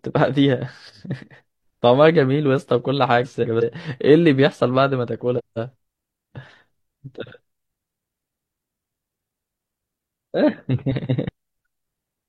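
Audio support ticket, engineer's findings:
Frames out of order at 3.24–3.63 s, 5.38–5.75 s and 10.91–11.29 s: garbled flutter. Adjacent 186 ms blocks are decoded swapped, which fits runs of four frames each. No time is lost.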